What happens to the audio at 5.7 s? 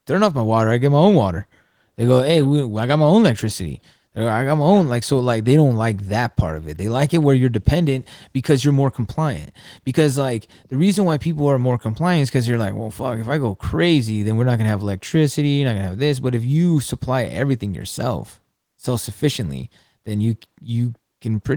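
Nothing goes wrong at 5.7 s; the speech runs on intact through that moment.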